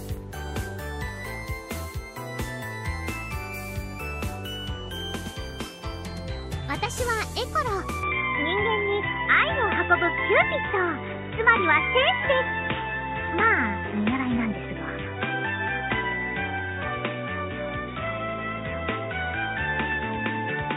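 From 8.03 s to the end, the sound abruptly turns dull and boxy, losing everything above 3.8 kHz, with no gap at the change, a shift in level of about 5 dB and a faint new background noise. This is likely an input switched to a poorer device mid-recording.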